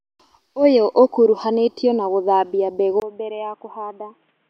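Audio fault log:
3.0–4.49 s: likely input switched to a poorer device. A 20 ms gap marks the switch. Then the speech turns dull and boxy, with nothing above 3.8 kHz, as from a narrower-band microphone. It gets noticeably quieter. A faint new background noise appears.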